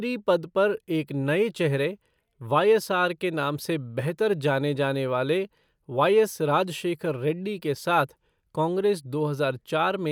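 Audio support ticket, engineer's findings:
No faults found in playback.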